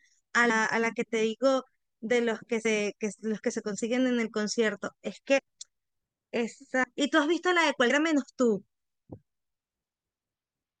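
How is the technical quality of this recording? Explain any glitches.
The speech repeatedly jumps forward, with compressed frames skipped at 0.49, 2.64, 5.38 to 5.40, 6.83 and 7.89 s. Each time a short slice of the sound vanishes, about a tenth to a fifth of a second. Whole coded frames never reached playback, so the audio leaps ahead by a multiple of the 21.3 ms frame length.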